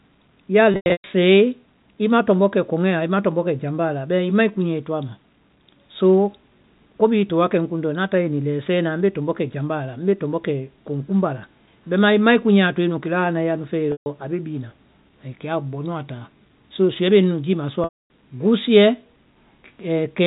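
Packet loss with pitch repetition hits this telephone speech recording at 0.72–1.04 s, 13.92–14.06 s and 17.84–18.09 s, where lost audio is bridged by repeating the last pitch period, giving brief buzzy, held tones that fade out, all heard through the 4 kHz band limit of G.711 telephone coding.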